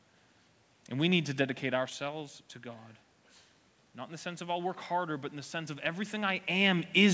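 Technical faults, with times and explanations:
1.86–1.92 s, loose connector crackle: a short, ragged burst of scratchy crackle, about 70 ms long, cuts across the speech. A worn or dirty contact is making and breaking as it shifts, chopping the signal.
4.07–6.40 s, automatic gain rising: the speech and the room noise swell together over more than two seconds, climbing by about 4 dB. The input had dropped by about 12 dB, so the automatic gain control slowly raised its gain to compensate.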